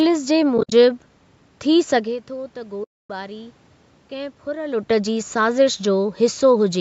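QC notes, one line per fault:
0.58–0.72 s and 2.84–3.10 s, AAC frame loss with muting: the sound dips into soft-edged silent gaps. In the first, about 100 ms of audio drops out in pieces spread over 140 ms, the longest piece around 70 ms. The second is one solid 260 ms hole. Lost frames were decoded as zeroed spectrum, and the overlapping windows fade the sound out and back in. The gap lengths fit the short frames of the low-delay AAC-ELD codec the call likely used.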